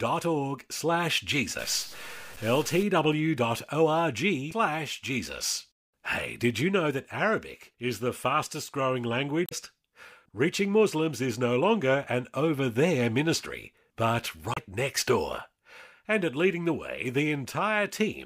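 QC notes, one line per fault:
1.59 to 2.83 s, stuck bit: distortion over the speech, likely one data bit held fixed, knocking about half the samples off by its weight.
4.48 s, 9.45 s (after "is the fastest growing") and 14.52 s (after "over there ministry but", before "next door"), damaged data in a compressed stream: short blips as the decoder misreads frames and loses sync.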